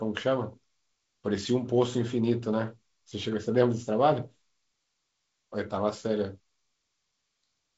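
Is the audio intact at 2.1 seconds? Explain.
Yes, at 2.1 seconds the speech is intact, carried through G.722 wideband telephone coding at 48 kbit/s with no fault at that moment.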